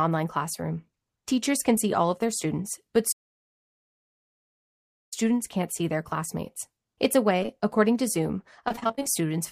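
Around 1.75 to 1.79 s there's a short concealed packet loss. About 20 ms of the speech didn't arrive in time, and the decoder papered over it by extending the previous sound, so you get a quick smear rather than a clean gap. The same thing happens twice back to back from 7.43 to 7.50 s, which makes a slightly longer wobble.

From 3.12 to 5.14 s the output drops out for a full 2 s in mid-flow, then picks up again. That's a playback stall, most likely the player running dry of buffered data or its thread getting blocked.

Between 8.68 and 9.06 s there's repeated packet loss, which gives that robotic sound. Ten separate holes, the longest about 27 ms, each get patched by continuing the last sound. Roughly half that stretch ends up synthesized, so it comes across choppy with bits missing.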